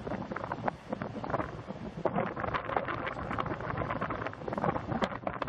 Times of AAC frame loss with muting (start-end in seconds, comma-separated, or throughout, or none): none